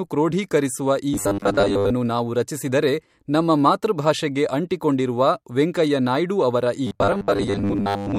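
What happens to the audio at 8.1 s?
At 8.1 s the speech has robotic sound from repeated short buffers, running from 6.87 s to 8.18 s. It becomes a rigid, metallic buzz at 100 Hz. Fresh audio likely arrives too rarely, so about 10 ms snippets repeat for most of the span.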